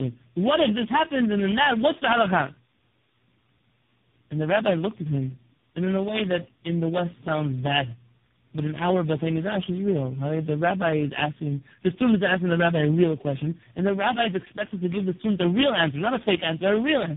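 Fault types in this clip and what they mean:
tandem speech coding: The call was decoded and re-encoded at each network border, so three low-rate speech coders in turn worked on one another's errors, ending in what sounds like a very low-rate AMR-NB mode. The speech comes out rough, muffled and warbly, with nothing above 3.7 kHz.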